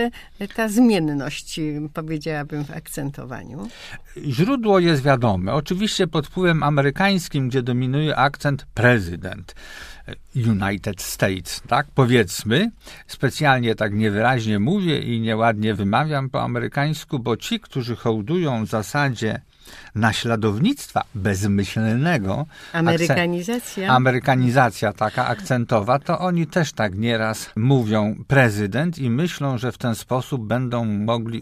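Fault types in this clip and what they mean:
There are no fault types in this clip to list.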